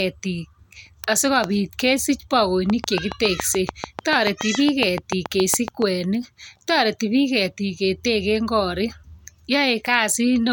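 From 2.70 to 5.83 s, a repeating impulse, likely interference from nearby equipment or a faulty connection or power supply, gets into the signal as a train of clicks. Around twenty near-identical pops tick at a steady 7 per second, standing about 15 dB above the speech.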